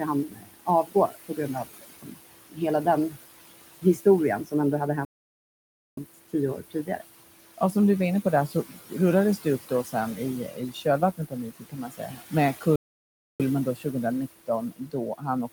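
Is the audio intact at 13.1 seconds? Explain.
No. At 13.1 seconds the sound is in a playback stall that runs from 12.76 to 13.40 s. The player most likely ran short of data or had its output thread held up, so nothing reached the output for about 0.64 s. The sound breaks off mid-flow into dead silence and then resumes, a clear hole rather than a fade.

The same moment also falls inside a stretch of speech cut by the noise suppressor, lasting from 8.48 s to the end of the clip. The suppressor is classifying parts of the speech as noise and pulling them down along with the background, by about 18 dB at the deepest point. Quiet consonants and word endings come out swallowed and faint.

Noise suppressor artifacts are present here as well, as they are across the whole clip. The suppressor lowers whatever bands it judges to be steady noise, frame by frame, cutting the room noise, which sits about 15 dB below the speech, by about 16 dB. 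That residue pumps down in the pauses and rises under the speech near 13.1 s.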